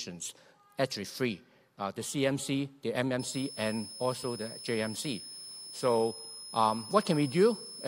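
From 3.19 s to 7.88 s, a switching supply whistle near 5 kHz sits roughly 15 dB under the sound, its pitch wandering between 5.15 and 5.26 kHz, unlike a fixed-frequency interference tone.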